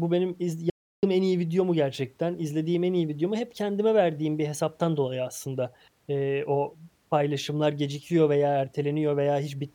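The input feed was likely interrupted for a moment, whether through a disconnected device, a dropped link or a brief mute, while the recorder kept writing zeros: an audio dropout to silence. From 0.7 s to 1.03 s, right after "bu benim iz", the speech cuts out abruptly and the gap is dead digital silence with no room tone at all. It resumes mid-flow with "en iyi video mu", and about 0.33 s of speech is simply missing.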